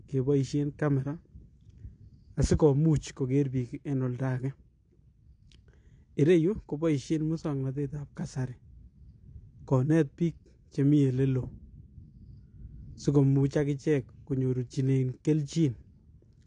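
Throughout, the speech sounds dull and smeared, with a fizzy, warbling edge and nothing above 9.8 kHz, likely AAC compression at a low bitrate around 32 kbps.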